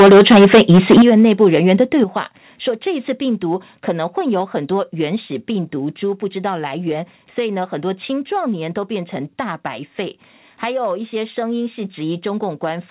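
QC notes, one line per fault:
0.0 to 1.02 s, microphone overload: the opening second is harsh and crackly, with the loudest syllables buzzing and breaking up. The waveform shows flat-topped peaks cut off at the converter's limit on around a third of the samples, and the spectrogram shows broadband smearing spreading up from each loud syllable toward the 4 kHz ceiling of the narrowband call path. The likely cause is an input level about 11 dB too hot, driving the converter past its limit.
1.02, 2.04 and 5.16 s, microphone volume stepped down: the level drops abruptly three times, by about 11 dB, then about 7 dB, then about 2 dB. The voice and the background fall together at each step, the first right after the crackling stops. On the waveform the envelope shrinks in clean steps with no fade, and on the spectrogram each step shows as a sudden dimming across every band at once. These shrinking steps are likely the call software turning the device's input volume down in stages after detecting clipping.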